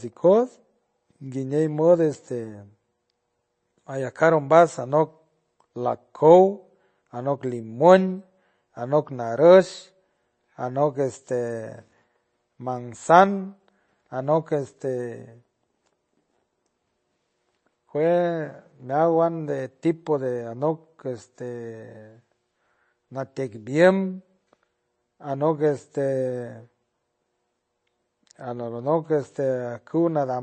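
Speech with plainly audible MP3 compression throughout: nothing above 8.3 kHz, and watery, swirling artefacts that a simple low-pass filter wouldn't cause, likely from a very low bitrate around 31 kbps.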